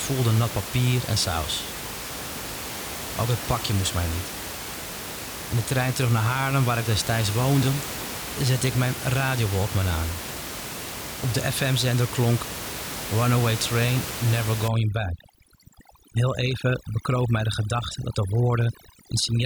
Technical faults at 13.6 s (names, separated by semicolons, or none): none